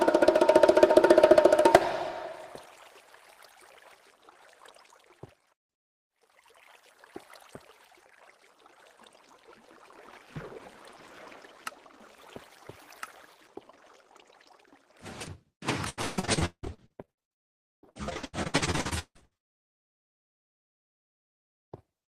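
Repeated packet loss (robotic sound) runs from 15.89 to 19.74 s. Dozens of short holes, the longest about 177 ms, are patched by stretching the preceding sound, covering roughly half this stretch and giving a choppy texture with fragments missing.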